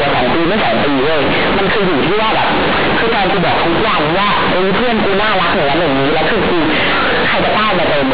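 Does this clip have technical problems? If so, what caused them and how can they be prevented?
Yes. Throughout, the speech sounds extremely loud, harsh and buzzy, with strong noise in the pauses. This is companded audio read as linear: A-law bytes played as plain 8-bit samples, never expanded, so quiet moments swing as widely as loud ones. Label the stream as A-law so the player expands it.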